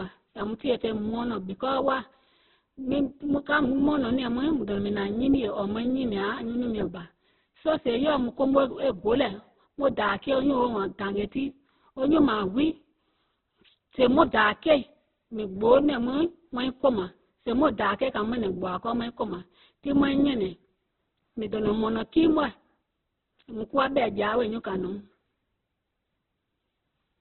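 From start to finish the speech is boxy and thin, with nothing above 4.1 kHz. What remains sounds rough and grainy, with a noisy edge replacing clean detail. This is likely heavy Opus compression, with the encoder in its music (CELT) mode rebuilding starved bands from folded or noise-filled energy. The narrowband cut-off and the heavy roughness fit a bitrate around 8 kbps, with too few bits to keep fine structure.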